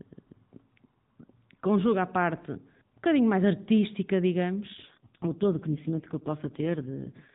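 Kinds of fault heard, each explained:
AMR rate drop: from 4.74 s the speech turns buzzier and more synthetic, fitting a 4.75 kbps mode; spectrogram harmonics smear, the band stays unchanged, and the waveform has no gap.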